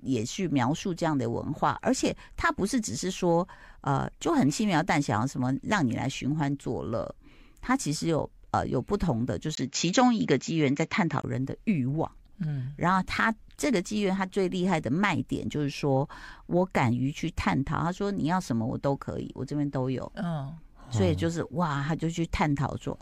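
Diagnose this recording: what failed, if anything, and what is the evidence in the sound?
At the driver level, from 9.55 to 11.24 s the spectrogram empties above 7.6 kHz after a 20 ms gap and level shifts about 5 dB, likely an input switched to a poorer device.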